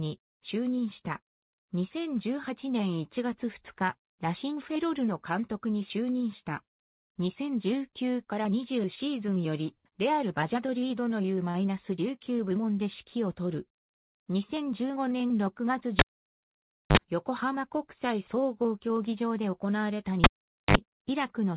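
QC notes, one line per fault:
11.50 s, short stall from a late packet: about 40 ms of the last sound is held in place while the jitter buffer waits for the late packet. Playback then resumes from the same point, so nothing is lost, but everything after runs 40 ms later. On a spectrogram this appears as a brief frozen, horizontally smeared patch. In the waveform it shows as a short repeated stretch.
15.99–16.97 s and 20.24–20.77 s, cable pulled and plugged in: in each event a live cable is pulled out and pushed back in. Each event begins with a pop, followed by near silence for about 0.93 s in the first event and about 0.48 s in the second. Each event also contains a short burst of 50 Hz mains buzz, lasting about 49 ms in the first event and about 60 ms in the second, while only the tip makes contact. A second pop marks the return of the sound. On a spectrogram the pops appear as vertical broadband stripes around a dark gap, with a brief low line at 50 Hz. 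In the waveform they appear as spikes around a nearly flat stretch. Nothing appears above 4 kHz in either gap or elsewhere, which fits a narrowband telephone codec on the call path.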